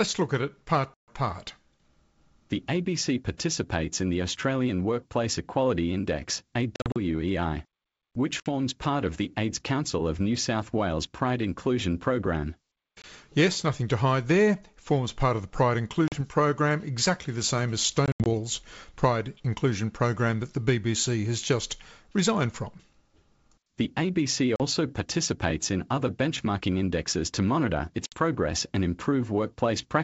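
Packet loss on an ADPCM call punches hard-edged silent gaps into the speech at 0.94, 6.76, 8.40, 13.02, 16.08, 18.06, 24.56 and 28.06 s. The longest is 140 ms at the start. The ones at 6.76 and 18.06 s are scattered dropouts spread over 200 ms. After each gap the decoder's predictor and step size have drifted from the sender's, so the speech comes back a bit off before settling. The G.722 wideband coding underneath stays clear throughout.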